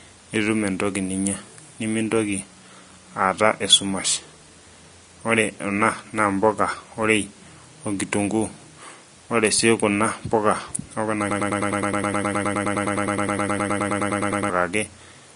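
Vorbis compression, throughout the speech, likely explains the grainy, hissy texture. Nothing is present above 10.6 kHz, so the top of the spectrum is cut away. Below that, the upper frequencies are coarsely quantised on top of a smooth spectral floor, and fine detail is turned into noise of similar energy. The sound takes on a gritty wash and attack edges are softened. The damage is plainly audible, which fits a low bitrate of around 35 kbps.

A broken-record loop runs from 11.31 to 14.5 s. A fragment 104 ms long repeats exactly, back to back, about thirty times, giving a rapid stuttering buzz at roughly ten repeats per second. The likely cause is a stall in the player, encoder or stream that kept resending the last fragment it held. The speech that should have filled those three seconds is missing.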